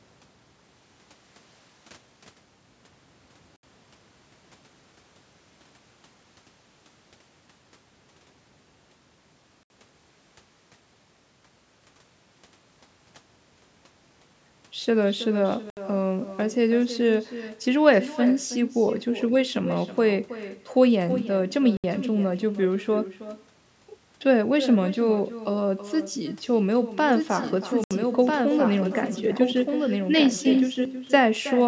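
Speech over a call, carrying echo with no canceller from start to finish: each phrase returns about a third of a second later, about 12 dB down and thinner, because the far end's loudspeaker feeds its microphone unchecked. A spectrogram shows faint delayed ghosts trailing every syllable. Gaps between chunks cut 69 ms holes at 3.56, 9.63, 15.70, 21.77 and 27.84 s, about 6.07 s apart, from chunked delivery leaving silence at each join. The waveform drops to silence with hard vertical edges. From 27.12 to 30.85 s a doubled audio track appears, likely a second, slower capture path. A full-band copy a few dB quieter runs about a second behind, switching on and off abruptly and showing no decay tail, as a parallel repeated pattern offset on the spectrogram. The call microphone processing leaves nothing above 8 kHz.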